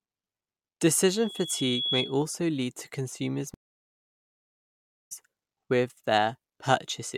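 Speech, and two faults worth flagging. From 1.07 to 2.23 s there's a loudspeaker feedback squeal: a 3.4 kHz tone swells over roughly 0.7 s until it sits about 5 dB above the talker, because the mic is hearing its own loudspeaker and that frequency's loop gain has crept past one. Then at 3.54 s we get a stream reconnect. The audio drops out for 1.54 s and comes back at 5.12 s about a second further on, so a chunk of speech is simply gone. The connection broke and the player started a fresh decoder mid-stream.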